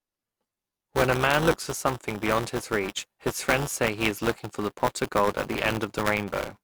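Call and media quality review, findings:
Robotic buzz at 200 Hz riding on the speech throughout, gone in pauses. Buffer tearing: playback ring buffer write/read pointers crossed, each 5 ms period carrying a small slice of audio about one lap (some 10 ms) stale, hard-joined both sides.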